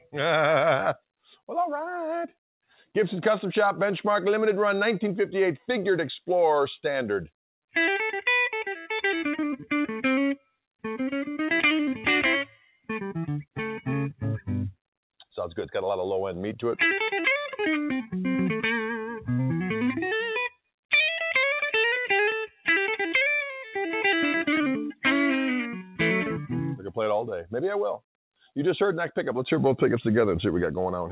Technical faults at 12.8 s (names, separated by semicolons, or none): sound cut by the noise suppressor